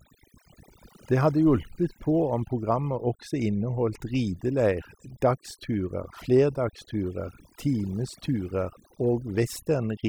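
A speech recording marred across its whole length by overdone noise removal: the background drops away and breaks up into twinkling specks. An overly aggressive noise reducer has cut frequency bands near its noise estimate, stripping quieter parts of the voice too.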